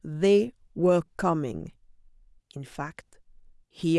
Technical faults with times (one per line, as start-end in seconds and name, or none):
none